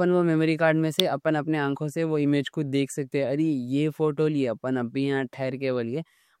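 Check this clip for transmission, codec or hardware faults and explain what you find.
One fault turns up in this speech recording: an electrical switching spike at 1.00 s. A brief snap sits on top of the speech there, likely from a nearby switch, motor or static discharge arcing and the audio line picking up that burst.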